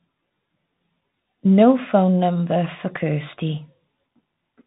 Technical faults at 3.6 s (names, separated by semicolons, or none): Bluetooth CVSD headset codec